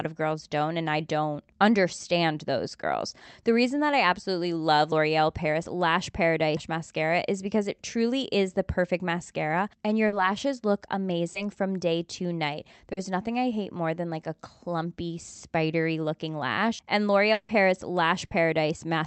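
At 10.07 to 10.15 s a burst of packet loss cuts into the speech. About 40 ms of audio never arrived, and the receiver covered it with roughly 50 ms of extrapolated sound that fades out. On a spectrogram the last sound smears sideways into a decaying band before the speech resumes. The same fault returns at 18.25 to 18.33 s, where about 60 ms is missing and filled in the same way.

Two short concealed packet losses fall at 11.33 to 11.37 s and 12.93 to 12.99 s, with about 20 ms and 40 ms lost. The decoder bridged each hole from the preceding sound, which leaves a brief smear or wobble. In the waveform these show as a slightly too-smooth patch where the envelope detail is missing.

From 17.33 to 17.51 s there is a held, fading continuation of the last sound about 160 ms long, replacing sound that never played, with no true silence. This is likely a long network dropout. On a spectrogram it appears as a frozen, dimming patch with a sharp resumption afterwards.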